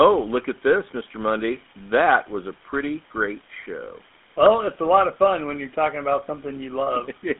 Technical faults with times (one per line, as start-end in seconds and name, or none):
0.00-7.39 GSM full-rate codec